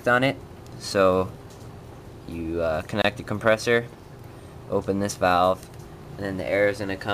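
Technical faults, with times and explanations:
3.02 to 3.04 s, gap at a join of encoded pieces: the sound drops out for about 24 ms, a short hole with blurred edges, then resumes exactly where it left off. This points to two separately encoded segments joined end to end without trimming, so the padding the encoder adds to the tail of the first piece and the start-up delay at the head of the second both remain as silence at the seam.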